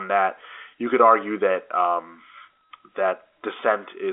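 Nothing stood out on listening to this speech clip, which carries the narrow band of G.711 telephone coding with nothing above about 3.7 kHz.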